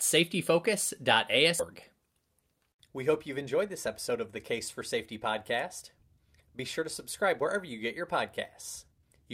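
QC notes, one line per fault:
1.59 to 1.61 s, skip ahead: roughly a second of speech is missing, with no fill. Playback jumps straight to later audio that was already queued, so the two sides are butted together with no audible gap.
3.28 to 4.14 s (ending just before "of the"), 6.57 to 7.56 s, and 8.87 to 9.27 s, jitter buffer speed-up: speech runs at 109%, 110% and then 146% speed, at unchanged pitch. Short pitch-period slices were trimmed repeatedly to drain an overfull buffer, removing about 70, 100 and 200 ms, so the speech sounds hurried.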